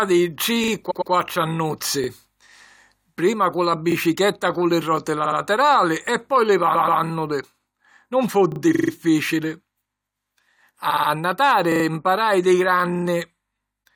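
Speech with two kinds of stutter. A repeated buffer occurs at 0.64, 2.04, 3.92, 8.52 and 11.72 s. A 40 ms piece plays one to three extra times when fresh audio arrives late, giving a short stutter. The waveform shows identical 40 ms cycles with hard joins, and the spectrogram shows thin vertical lines at each join. Repeated frames occur at 0.90, 5.25, 6.74, 8.74 and 10.89 s. Blocks of 43 to 128 ms, which fits compressed frames of about 21 ms, play again two to four extra times, adding 0.13 to 0.26 s each time. The waveform shows duplicated segments, and the spectrogram shows a copied pattern.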